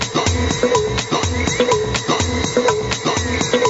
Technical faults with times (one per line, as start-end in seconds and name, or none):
0.00-3.70 gain pumping